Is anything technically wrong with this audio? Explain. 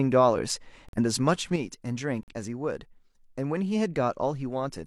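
Yes, there are two kinds of fault in this speech clip.

Corrupt frame muted, at 0.89 to 0.98 s and again at 2.23 to 2.33 s. Each time a compressed frame was damaged, the decoder rejected it, and the player filled its slot with silence. Each gap lasts about 0.09 s, which fits a single frame. The speech cuts out abruptly, leaving a short hole, then resumes with its timing intact.

One channel drops out, from 1.56 s to the end. The speech suddenly falls by about 6 dB and stays lower, which is what happens when one side of a stereo pair goes missing and the remaining signal is summed to mono. The likely cause is a lost stereo channel: the content shared by both sides is halved, and anything that existed only in the missing side disappears.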